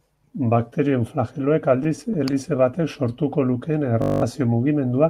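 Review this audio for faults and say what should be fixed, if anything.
From 1.83 to 2.62 s the speech drags through seven tiny hiccups. These are repeated stalls (stutter): late packets kept draining the jitter buffer, and the receiver stretched the last sound across gaps of up to 16 ms. A larger or adaptive jitter buffer would prevent this.

From 4.02 to 4.22 s a steady 50 Hz buzz replaces the speech. This is a system hang loop: one 20 ms buffer replayed ten times while the system froze, losing about a fifth of a second. Fixing the driver or system freeze, and having the audio path mute rather than loop when it stalls, would prevent this.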